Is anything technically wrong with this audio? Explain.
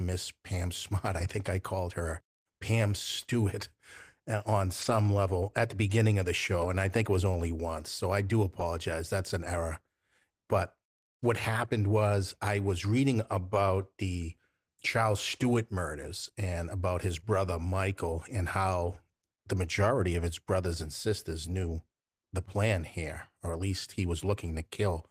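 Yes. Six short stretches of packet loss were rebuilt from error correction: 1.19 to 1.29 s, 4.81 to 4.95 s, 6.61 to 6.67 s, 8.59 to 8.65 s, 16.23 to 16.29 s and 18.86 to 18.96 s. Each time, the packets carrying that audio never arrived, but the following packet held a reduced-bitrate duplicate, which the decoder played in their place. There is no dropout. The speech instead turns coarser and grainier for 40 to 80 ms, with the longest rebuilt patch near 4.9 s.

A short concealed packet loss occurs at 17.19 to 17.24 s. About 20 ms of audio was missing, with no backup copy to draw on, so the receiver extended the preceding sound to cover the hole, over about 28 ms, before fading back into the real signal. It comes through as a brief smeared or wavering blip. Any quick consonant that fell in that instant can drop out entirely.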